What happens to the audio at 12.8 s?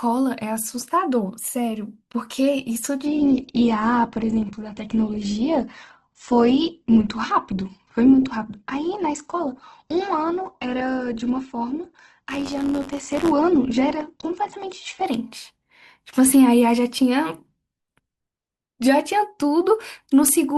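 Two faults overlap here. The speech sits inside a stretch of adaptive stream at a lower bitrate running from 3.06 s to 15.06 s, where the player switched to a much leaner encoding after the connection slowed. Codec artefacts rise in the voice, which points to a drop from Opus 64 kbit/s to roughly 12 kbit/s. On a spectrogram there is a sudden edge at 3.06 s and no gap in the waveform.

From 12.28 s to 13.32 s there is also buffer tearing. The writing and reading sides of the audio ring buffer have drifted so they cross within every period. A small slice of each buffer, about a twentieth, still holds audio from a few tens of milliseconds earlier, spliced in with hard joins. This produces a rasping robotic buzz at 93.8 Hz, which fits a 512-sample buffer, and it is present only while the voice is. The waveform shows regular discontinuities, and the spectrogram shows vertical stripes spaced about 10.7 ms apart.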